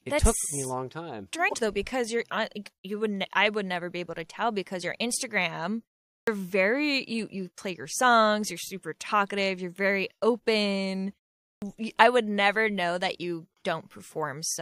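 A speech clip with two kinds of fault. At 1.45 to 1.54 s there is a short burst from damaged data in the compressed stream. The decoder hits corrupted frames, loses sync and hunts for the next header. The result is a brief glitch. There is also a clipped start after a pause, twice. At 6.17 s, after a pause of about 0.37 s, roughly 104 ms of sound is missing. At 11.51 s, after about 0.4 s of quiet, roughly 110 ms is lost. Each time, the output device has slept through the silence and wakes too late. The sound starts abruptly, without its opening.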